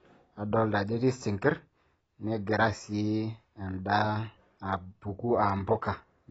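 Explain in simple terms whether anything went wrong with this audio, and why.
The speech sounds dull and smeared the whole way through, with no crispness above 7.7 kHz, likely from heavy AAC compression discarding the fine detail.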